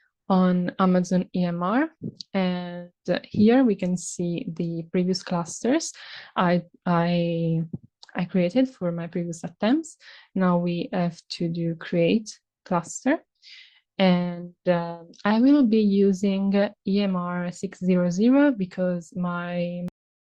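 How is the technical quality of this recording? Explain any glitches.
There's one real glitch, a cut-off end right at the close. At about 19.88 s the sound just stops mid-stream and drops straight to digital silence for the last half-second or so. There's no fade or natural decay at all. What's happening is that the final stretch of audio never got written out or played, so whatever was sounding at that moment is chopped off instead of finishing.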